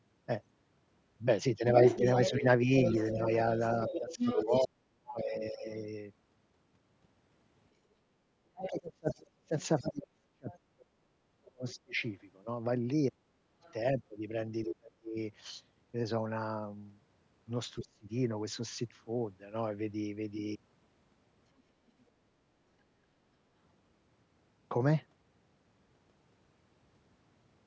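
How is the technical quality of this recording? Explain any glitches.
The recording has two recurring call-audio problems: a second voice bleeding in, and the main talker being pushed down when both sides speak. The band stops at 8 kHz, which fits normal call microphone processing.

Other side's voice leaking through appears at 1.84 to 5.33 s, 8.64 to 11.74 s, 13.62 to 14.68 s and 21.59 to 22.03 s. It is loudest in the first stretch, only about 5 dB under the talker, and fades to barely audible by the last one. The likely cause is loudspeaker sound reaching the microphone and surviving echo cancellation. Unlike suppression, this adds a voice rather than removing one.

Speech suppressed in double talk hits 1.98 to 5.67 s, 8.22 to 15.17 s and 17.81 to 18.11 s. During these spans the talker's voice dips, sometimes by around 40 dB, for roughly 1.5 s, 4 s and 0.3 s in total. The likely cause is the canceller clamping down on the whole signal while both sides talk. 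What sets it apart from leakage is that the talker loses level.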